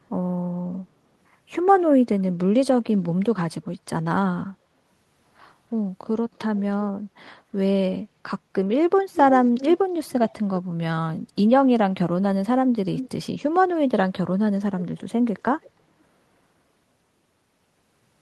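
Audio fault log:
6.33–6.46 s, 9.14–9.78 s, 12.96–13.09 s, 15.62–15.7 s: echo leak. A delayed copy of the speech returns about 320 ms late, clearest at 9.14 and 12.96 s, faint elsewhere, likely from a loudspeaker echo canceller letting pickup through. Unlike reverb, it's a distinct repeat at a fixed lag.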